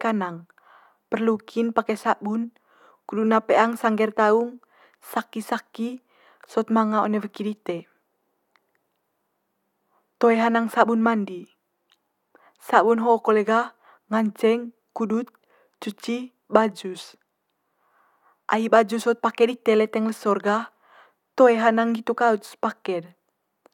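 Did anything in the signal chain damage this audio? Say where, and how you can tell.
No, nothing in the chain audibly damaged this speech.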